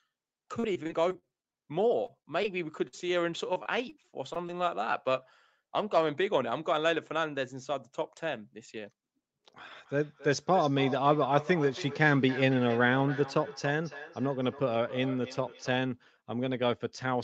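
From 0.59 s to 4.69 s the speech turns choppy, with around twenty brief dropouts, the longest 46 ms. This is repeated packet loss (robotic sound): audio packets kept going missing or arriving too late, and each hole was bridged by stretching the preceding sound. Those synthetic fills cover about 11 percent of the stretch, while some material is simply lost.

Between 8.76 s and 9.37 s the speech briefly sounds rushed, running at about 111 percent speed with its pitch unchanged. This is a jitter buffer speed-up. The receiver had built up more queued audio than it wanted, so it cut out very short pieces, each only a pitch period or a few long, one after another. Around 70 ms was removed in total to bring the delay back down.

From 9.72 s to 16.00 s each phrase returns as a thinner, ringing copy roughly a third of a second later, peaking at about 13 dB below the speech. This is feedback echo between two devices. 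Two devices in the same room are on one call. One plays the other's microphone signal through its speaker, and that microphone captures it again. Neither echo canceller removes sound played by the other device. Throughout the clip the audio stops at 8 kHz, which fits an Opus call at that bandwidth.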